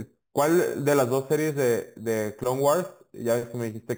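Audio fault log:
throughout, imaging from sample-and-hold upsampling: the speech carries a bright metallic fizz that rises and falls with it, because each original sample was simply repeated to raise the rate without smoothing. This fits 8 kHz audio held up to 48 kHz. On a spectrogram the speech band appears mirrored into 4 to 8 kHz and again around higher multiples of 8 kHz, about 18 dB down, with the lowest copy's harmonics sloping opposite to the pitch. The waveform shows tiny flat steps.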